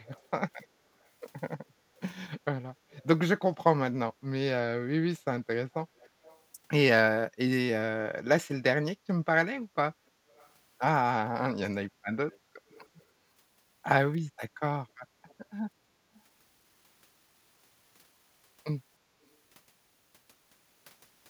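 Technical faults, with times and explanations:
0.05–0.28 s, 2.9–3.04 s, 5.98–6.41 s, 10.35–10.49 s, 12.31–12.39 s, 12.7–13.04 s and 15.28–15.34 s: echo leak. A faint copy of the speech comes back about 310 ms late, sitting roughly 30 dB under the direct signal, and closer to 35 dB down at 10.35 s and 15.28 s. The likely cause is a far end on speakerphone whose echo canceller didn't fully scrub what its mic picked up, so scraps got sent back down the line.
15.86–15.99 s: background gated by the echo canceller. The room tone ducks by about 12 dB for roughly a tenth of a second, then comes straight back. That's the canceller clamping the mic hard while the loudspeaker was active and letting go once it judged the coast clear.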